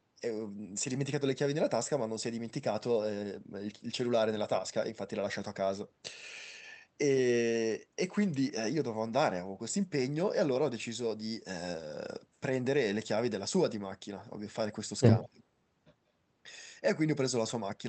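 From 15.24 to 15.42 s the speech dips about 25 dB, likely speech suppressed in double talk, with the echo canceller turning down its own talker along with the loudspeaker echo.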